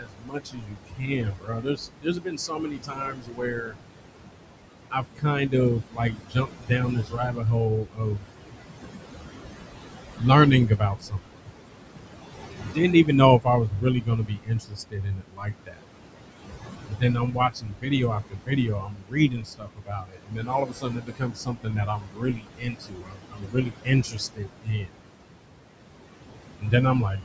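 Speech recorded through call microphone processing, with nothing above 8 kHz and room noise only about 8 dB under the voice. The noise suppressor pulls the background down by about 21 dB, so it pumps between phrases throughout. Speech cut by the noise suppressor is also present: it mistakes parts of the voice for noise and dips them by about 20 to 22 dB at 0 to 3.77, 4.91 to 5.54, 5.85 to 8.52, 10.66 to 11.51, 12.54 to 15.85, 16.87 to 25.03 and 26.59 to 27.25 s, leaving quieter bits swallowed, with most of the 17 to 25 s stretch sounding faint.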